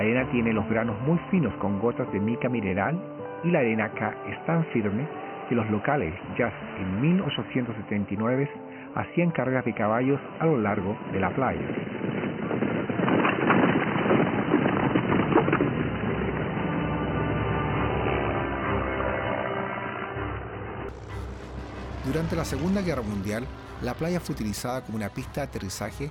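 From the start until 20.89 s the audio sounds dull and boxy, with nothing above 3 kHz, a faint background noise sitting roughly 35 dB under the signal, and a level that differs by around 5 dB from the rest. At 20.89 s it clears abruptly with no gap. This is likely an input switched to a poorer device, such as a headset's call profile or a lesser microphone, before the better input took over.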